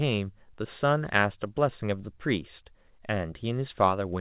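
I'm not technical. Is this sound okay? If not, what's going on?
Yes, nothing is wrong with this speech recording. It has the narrow, telephone-like sound of a call line, which carries nothing above about 4 kHz, so the brightest, airiest part of the sound is missing, as on any ordinary phone call.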